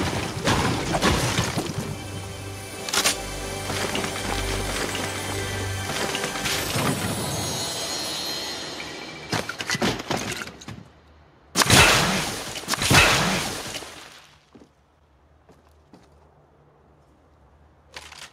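No technical faults are audible anywhere in this recording.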